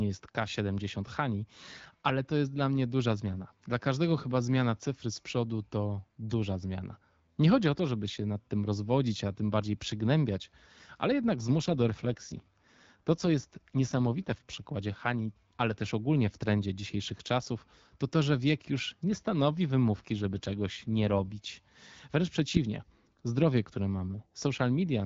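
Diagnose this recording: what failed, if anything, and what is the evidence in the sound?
The network stage failed: at two points the radio link weakened and the network forced an AMR rate drop, cutting the wideband codec's speech bits to spend more on error protection. From 11.63 to 14.62 s and again from 19.96 to 21.32 s the speech turns rougher and more synthetic, with no gap and no narrowing of the band. That fits a step down from 12.65 to 8.85 kbit/s, and the clearer HD Voice sound returns each time the rate recovers.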